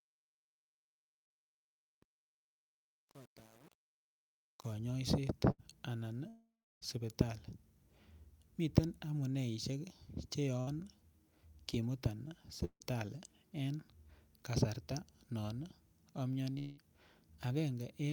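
From 0.0 to 4.73 s the speech carries a fade with truncation distortion: the fade keeps only about 8 bits without dither, so quiet passages sound gritty, with staircase steps in the waveform.

At 5.51 to 5.60 s and again at 10.60 to 10.69 s, a burst of packet loss drops about 80 ms and 60 ms of speech. The receiver stretches the last sound over the gap, so a brief fading buzz or hiss appears as a smeared, decaying band on a spectrogram before the speech resumes further on.

Long network dropouts, likely from interrupted delivery, occur at 6.28 to 6.87 s, 12.65 to 12.82 s and 16.58 to 16.83 s. Each holds a fading tail. In the first, about 320 ms of flat silence follows the tail, and in the second about 60 ms. The third has no silence.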